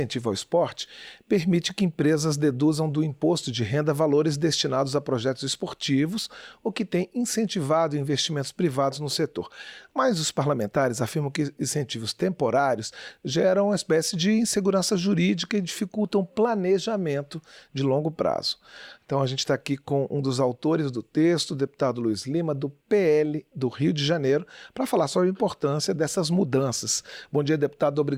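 Nothing goes wrong anywhere in this one; you can just sit back and listen without a single technical hiccup to point out.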